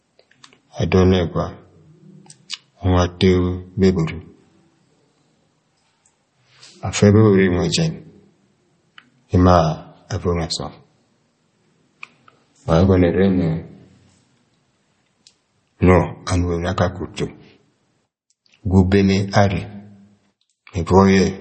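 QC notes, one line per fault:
Throughout: MP3 compression. Nothing sounds above 8.4 kHz, so the speech is dull. A watery, swirling texture is plainly audible. The likely cause is a starved MP3 encoder, fitting near 32 kbps, cutting the treble and switching weak frequency lines on and off.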